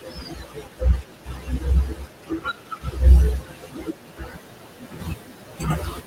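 From 0.0 to 3.0 s and again from 3.38 to 6.06 s, speech is cut by the noise suppressor. It mistakes speech for noise and dips it by up to about 19 dB, leaving faint, swallowed endings. These show as sunken waveform stretches and blotchy spectrogram gaps, even as room noise rises around four and a half seconds.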